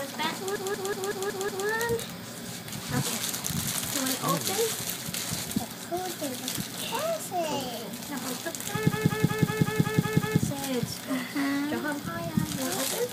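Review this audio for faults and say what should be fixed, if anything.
A system hang loop occurs twice, from 0.56 to 1.67 s and from 8.92 to 10.40 s. Each time, a 186 ms slice of audio repeats exactly, six times and then eight times. The result is a machine-gun stutter at about 5.4 Hz. The loop length fits an 8192-sample ring buffer that the hardware kept replaying while the driver stalled. Fix this by eliminating the system or driver stalls and muting output when the buffer stops refilling.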